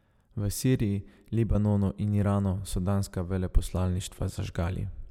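A speech recording with nothing technically wrong with it.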